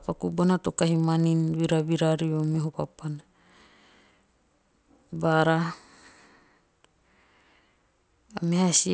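Throughout the speech, a resampler restarted on every block leaves a 25 Hz tick pattern. Each 40 ms block is converted in isolation, consistent with 48 kHz going down to 16 kHz, so every block edge lacks its true neighbouring samples and carries a small error.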